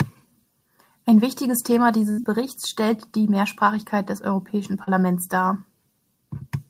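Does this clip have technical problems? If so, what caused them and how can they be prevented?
Yes. At 2.11 to 2.20 s there's a burst of packet loss: about 60 ms of speech never arrived, so the receiver stretched the last sound for 62 ms, fading it before jumping ahead. A bigger jitter buffer and redundancy (FEC) would help.

From 4.18 to 4.24 s the level suddenly sags by about 6 dB and then comes back, which is likely one channel dropping out before the stereo pair was folded to mono. Checking the cabling and stereo interface, or sending mono, would prevent it.

Then at 4.84 to 4.89 s there's a short concealed packet loss: roughly 40 ms went missing, and 34 ms of synthesized continuation covered it, giving a brief smear before the real audio blends back. Steadier network paths and in-band FEC would prevent it.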